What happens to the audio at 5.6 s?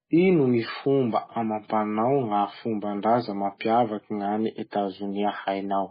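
At 5.6 s you're still hearing MP3 compression, which runs through the whole speech clip. It's likely a very low bitrate, something like 16 kbps, starving the encoder. Nothing comes through above 5 kHz, and the dropped-out weak bands make everything sound watery and smeared.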